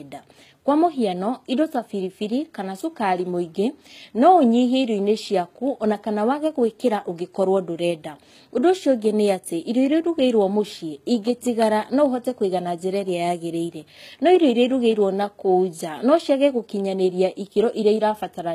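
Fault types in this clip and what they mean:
HE-AAC compression: The upper range of this speech has that synthetic sheen you get when the treble isn't coded at all but rebuilt by copying lower bands upward and shaping them loosely. The damage is plainly audible across the whole clip, with gritty, lispy s sounds and a metallic edge where the rebuilt top fails to line up with the real harmonics below. The likely cause is HE-AAC at a very low rate, something like 20 kbps.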